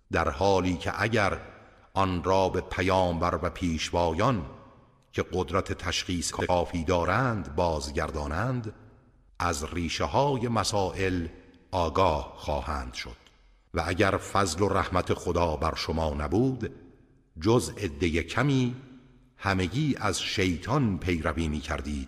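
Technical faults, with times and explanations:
2.49–2.53 s, 4.01–4.03 s, 6.30–6.50 s and 15.02–15.07 s, frames out of order: brief garbled flutters, longest at 6.30 s. Two adjacent blocks (about 36, 12, 93 and 36 ms each) play swapped, so the sound runs out of sequence without losing time.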